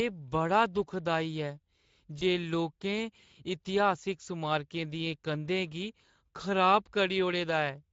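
From the first second to the end, the speech carries Speex codec damage, and it is plainly audible. Speex is a CELP coder. It models the voice with a filter and a coded excitation signal. Here the excitation gets too few bits. Voiced sounds turn hoarse and grainy, with a noisy edge. The amount of damage fits a middle Speex setting near 16.8 kbps. At that setting, any band above 4 kHz is only a shaped noise fill.

From 2.19 to 2.23 s there is VoIP packet loss concealed by the speech codec. The gap fits one lost 20 ms frame. The decoder had no new data. It repeated its last pitch and filter at falling gain. The result is a brief buzzy or noisy smear in place of real speech. Each frame builds on the previous one. So the voice sounds thin and distorted for a short moment after the gap ends.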